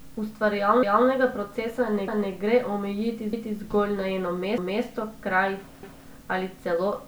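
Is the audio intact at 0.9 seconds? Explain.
No. Overlapping chunks: each 1-second chunk begins about 250 ms before the previous one ends, so from 0.83 to 1.08 s that stretch of speech plays twice, stuttering just before "procesa ne gre omejiti".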